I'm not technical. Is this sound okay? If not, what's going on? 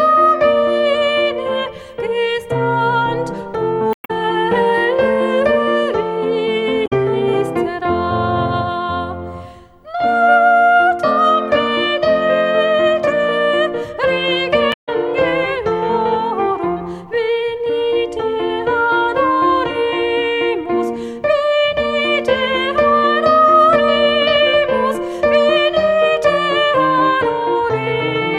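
No. There is damaged data in a compressed stream: parts of the file got corrupted, so the player loses its place and must hunt for where to resume. You hear brief chirps or blips at 3.91–4.11, 6.83–6.93 and 14.70–14.89 seconds.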